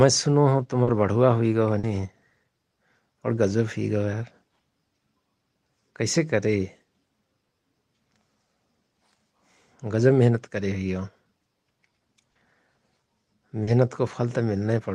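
Short concealed packet loss occurs four times in this speech, at 0.83–0.90 s, 1.79–1.86 s, 12.31–12.38 s and 13.63–13.70 s. Each time about 40 ms of audio failed to arrive at the decoder in time, and the receiver covered the gap by extending the preceding sound, pitched if voiced or as shaped noise if not, before crossfading back into the real signal. Each event comes through as a brief smear or wobble, and a short consonant there may disappear.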